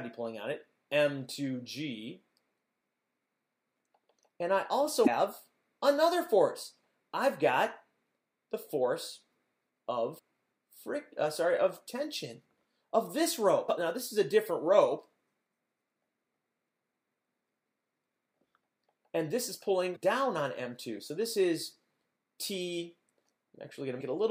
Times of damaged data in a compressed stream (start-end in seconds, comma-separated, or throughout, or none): 5.03-5.08, 10.15-10.19, 13.65-13.69, 19.92-19.96, 24.00